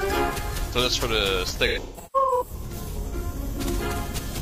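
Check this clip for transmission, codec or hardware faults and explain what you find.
There's one problem here, AAC frame loss with concealment, scattered between 1.67 and 3.14 s. About 768 ms of audio drops out in gaps up to roughly 150 ms. The decoder covers each gap by rebuilding the last good spectrum, so those patches sound smeared, noisy and a bit phasey.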